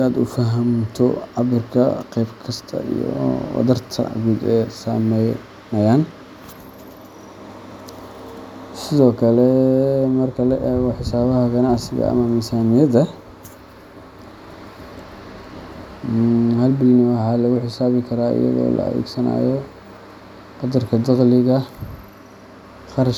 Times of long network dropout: none

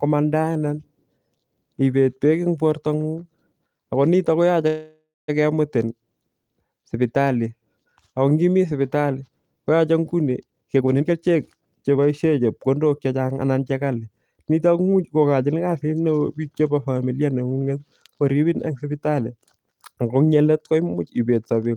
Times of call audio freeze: 4.67-5.30

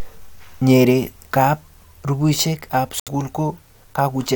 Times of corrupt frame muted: 3.00-3.08

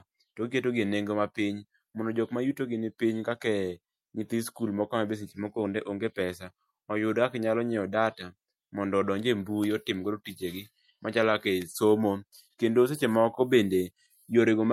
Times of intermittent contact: none

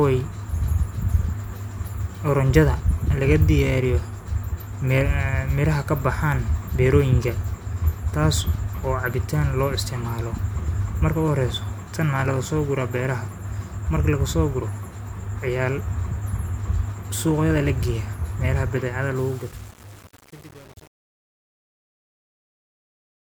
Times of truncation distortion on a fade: 19.16-23.27

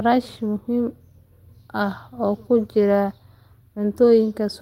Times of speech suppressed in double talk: none

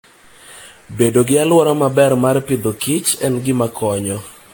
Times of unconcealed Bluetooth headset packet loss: none

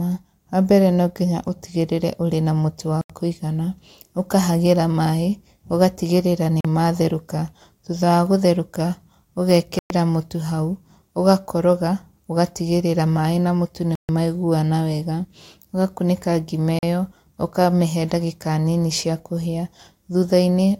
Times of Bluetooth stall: 3.01-3.10, 6.61-6.65, 9.79-9.90, 13.95-14.09, 16.79-16.83

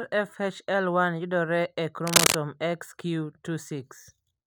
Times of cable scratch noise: 2.07-2.35

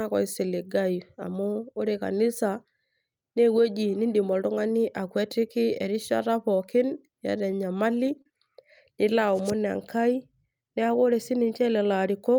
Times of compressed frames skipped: none

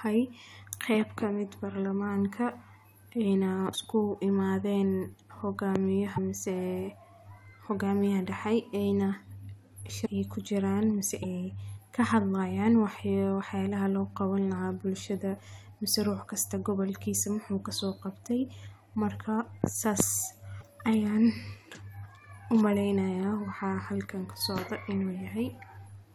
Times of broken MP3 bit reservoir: 3.72-3.75, 6.15-6.18, 10.05-10.08, 11.22-11.25, 20.60-20.63

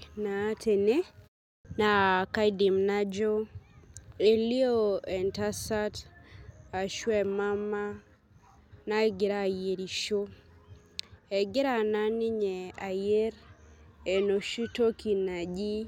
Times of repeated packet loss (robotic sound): none

